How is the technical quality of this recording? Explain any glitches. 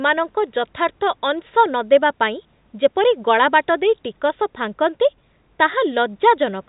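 The technical quality of this recording holds up, with no glitches to explain.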